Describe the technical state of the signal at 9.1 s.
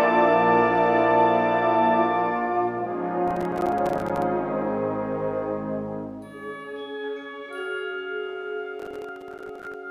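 At 9.1 s you're right in the middle of a processor overload crackle that runs from about 8.80 to 9.74 s. The processor keeps missing its deadlines on what sounds like buffers of around 5 ms, a few dozen times over that stretch. Each miss drops a short hard-edged hole of silence, and together they make a gritty crackle tearing across the sound.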